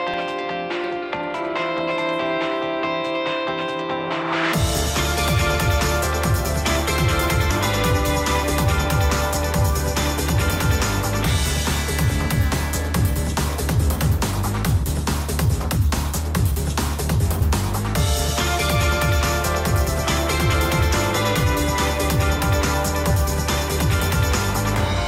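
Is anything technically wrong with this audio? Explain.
Yes. At 17.41 s there is audio missing between chunks. The sound jumps forward abruptly, skipping about a tenth of a second, likely because a recorder working in 10-second chunks lost material while switching. The waveform shows a hard splice with no gap, and the spectrogram shows a sharp vertical seam.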